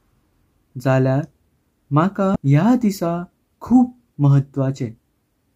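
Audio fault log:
2.35 s, damaged data in a compressed stream: a brief glitch cuts across the speech for about 12 ms. Corrupted bytes in the compressed stream leave the decoder misreading a frame and losing sync until it finds the next valid header, so the output is briefly wrong. On a spectrogram this shows as a narrow vertical disturbance unrelated to the surrounding speech harmonics. The waveform shows an abrupt discontinuity.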